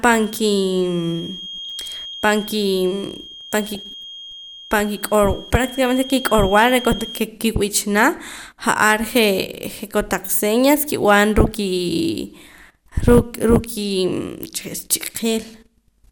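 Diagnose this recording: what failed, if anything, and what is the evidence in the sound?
A thin whistle at 3.2 kHz sits roughly 15 dB under the speech from 0.0 to 7.30 s, stopping just before "ki'b'ichana ja'ar". This is a feedback whistle, likely from an acoustic loop between loudspeaker and microphone held just below runaway. On a spectrogram it shows as one unbroken horizontal line.

DAB burbling appears at 1.65–2.14 s, 3.72–3.81 s, 6.35 s, 8.17–8.42 s, 11.44–11.51 s (after "kotaq señas kib'an") and 15.06–15.18 s. Residual bit errors in the MP2 stream corrupt sub-band samples and scale factors, giving short blips of noise and brief sub-band level jumps. The spectrogram shows isolated band-limited blocks jumping in level frame by frame.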